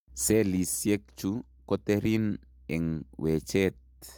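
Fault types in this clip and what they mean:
Nothing here to list; the speech comes across with no technical faults to point out.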